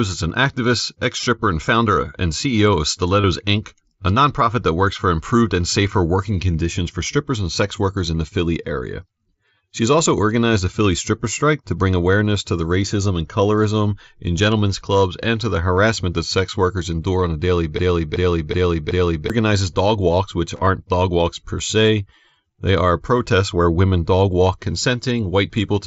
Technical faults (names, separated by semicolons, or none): concealed Bluetooth headset packet loss; broken-record loop